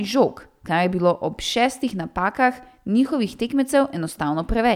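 No technical faults are audible.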